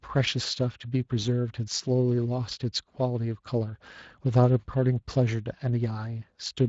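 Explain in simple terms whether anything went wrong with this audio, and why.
Something did go wrong, and it runs the whole way through the speech, from the first second to the end. The voice has the roughened, hoarse and grainy quality of the Speex codec, an older speech compressor used in VoIP and game chat. Speex rebuilds the voice from a simplified model and spends only limited detail on the buzzy raw sound underneath it. That shortcut leaves a noisy rasp you can clearly hear on this recording.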